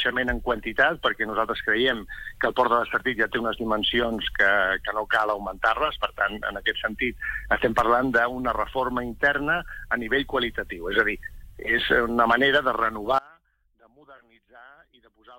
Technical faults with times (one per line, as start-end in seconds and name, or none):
13.18-15.39 audio dropout to a faint residue